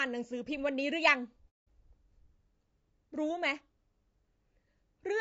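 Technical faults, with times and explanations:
Throughout, low-delay AAC compression: the speech was most likely coded with a low-delay AAC codec of the kind used for video calls. Its frames of roughly 30 ms each code about 500 frequency lines, and at what sounds like a bitrate around 32 kbps there are too few bits to spend. The voice turns plainly rough and grainy, with noise filling the gaps between harmonics and a thinned, artificial-sounding top band.
1.49 to 1.68 s, AAC frame loss with muting: a run of coded frames never reached the decoder, and it replaced their spectrum with silence, leaving a 180 ms gap, which fits about six lost frames. Because AAC frames overlap, the sound fades out into the hole and fades back in over roughly a frame at each edge. The result is a soft-edged dropout rather than an abrupt cut.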